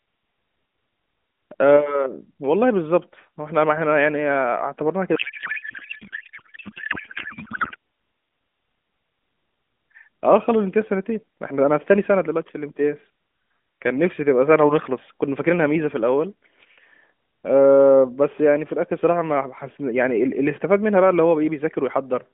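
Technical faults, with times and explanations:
5.16 to 7.76 s, codec payload misread: the receiver unpacked the AMR frames with the wrong bit layout, which fits octet-aligned data read as bandwidth-efficient. Parameters land in the wrong fields, so the speech becomes garbled warble and noise that barely follows it.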